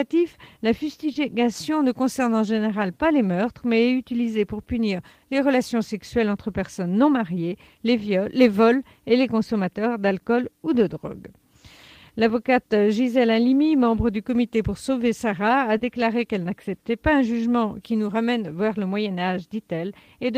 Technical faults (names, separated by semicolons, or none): short concealed packet loss